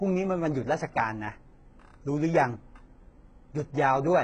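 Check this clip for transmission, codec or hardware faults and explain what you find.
There is one codec fault, and it runs through the whole clip. The speech carries the marks of HE-AAC compression at a very low bitrate, around 12 kbps. The heavy damage is likely from spectral band replication. Nothing is present above 10.2 kHz, and the upper band is rebuilt from copied lower bands shaped by a coarse envelope. The treble therefore reaches higher than plain AAC would at this bitrate but is not the original: harmonics misalign across the crossover, and s sounds turn gritty and metallic.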